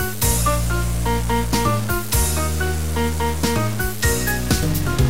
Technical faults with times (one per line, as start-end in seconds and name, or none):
0.00-5.09 low bit depth without dither